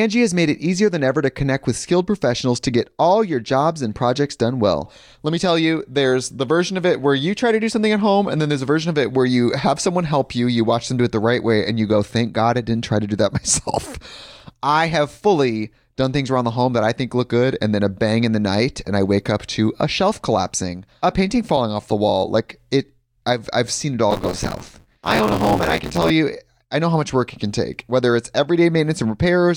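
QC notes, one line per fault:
24.10–26.11 s buffer tearing: robotic 86.1 Hz rattle on speech; each period splices in old audio from one lap back, fitting a 512-sample buffer.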